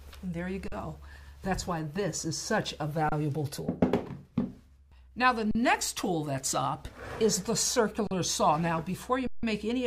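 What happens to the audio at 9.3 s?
An underrun with held sample runs from 9.27 to 9.43 s. The output buffer emptied, and instead of dropping to silence the converter kept repeating its last value for 160 ms, so the waveform sits flat. The sound simply stops with almost no click. Since essentially nothing was skipped, playback picks up exactly where it froze, and the return is a soft join rather than a sharp click.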